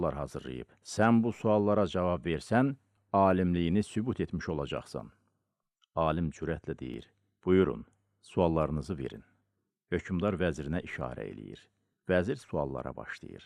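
Overlap between stream segments at 0.98, 5.95 and 6.94 s: overlapping 1-second segment timestamps make the player trim real sound, so the waveform jumps with a brief click or skip.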